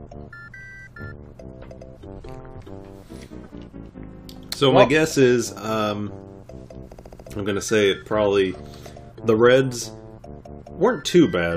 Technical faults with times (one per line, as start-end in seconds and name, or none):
6.91-7.26 repeated frames